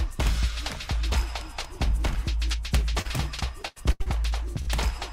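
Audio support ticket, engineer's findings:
Short concealed packet loss at 3.01–3.07 s: brief smear. Receiver-side concealment extended the prior sound for about 33 ms and blended back, with roughly 40 ms of audio missing.

Repeated packet loss (robotic sound) from 3.63 to 4.08 s: choppy stretch with pieces missing. There are four gaps, the longest 82 ms, and about half of the span is concealed. The jitter buffer and network path are suspect.

Burst of packet loss at 4.62–4.69 s: the sound is held and fades. About 51 ms was filled by continuation and attenuation, and roughly 40 ms of audio was skipped before playback resumed.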